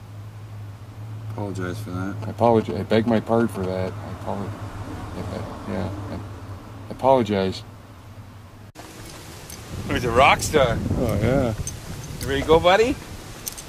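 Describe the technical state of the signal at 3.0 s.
At 3.0 s the audio carries GSM signalling bursts, running from 2.22 s to 3.89 s. A nearby 2G handset is signalling to the network, and the audio circuitry rectifies its radio pulses into a galloping dit-dit-dit of short 217 Hz buzzes, sitting about 10 dB below the programme sound. A steady mains hum or continuous phone-call buzz would drone without a break, but this pattern comes in clustered, stop-start groups.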